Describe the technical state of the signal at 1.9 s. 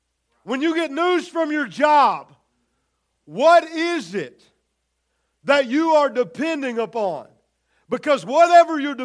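At 1.9 s the speech signal is intact, with no audible fault at that moment.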